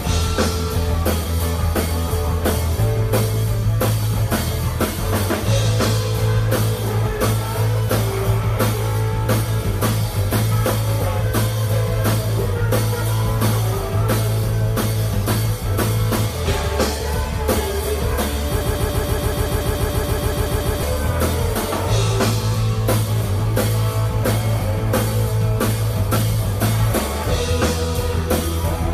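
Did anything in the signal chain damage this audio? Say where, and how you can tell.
Yes. From 18.61 s to 20.83 s the sound locks into a broken-record loop: a fragment of about 143 ms repeats exactly and back to back, 16 times, with a mechanical stutter at a fixed rate of roughly seven per second. The repetitions are sample-identical rather than varied, which points to the buffer or stream stage, most likely a stalled player or decoder re-sending the last block it held. The audio that belonged in those two seconds is gone.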